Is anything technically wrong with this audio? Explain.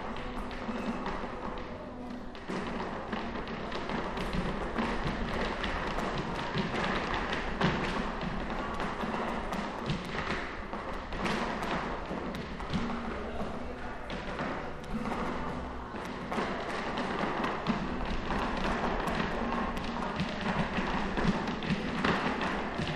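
No, nothing technically wrong can be heard: the signal stays continuous and stable throughout, with no audible faults in the recording or its playback.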